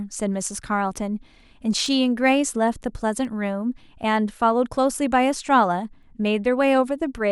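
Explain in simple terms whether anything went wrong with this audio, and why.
Sharp ticks, about five, come roughly every 1.5 seconds from 0.47 to 6.03 s. These are word clock ticks: two unsynchronised digital clocks drift slightly, dropping or repeating one sample each time.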